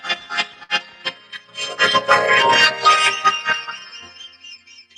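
At 0.63 to 0.71 s a packet arrived late and the jitter buffer ran dry, so the receiver held the last sound for about 58 ms until the data came in. The result is a short stall: one sound stretched with a faint buzz or dip, with nothing lost.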